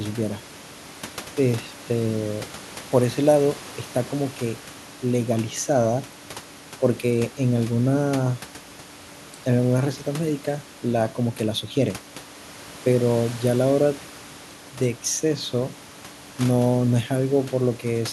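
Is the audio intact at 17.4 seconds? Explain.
Yes, the audio is intact at 17.4 seconds, with only the room noise present, about 22 dB below the speech.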